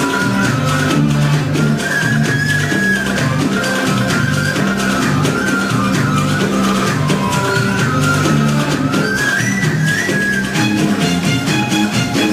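No technical fault can be heard anywhere in this audio. Nothing in the sound points to a problem with how it was captured, processed or delivered.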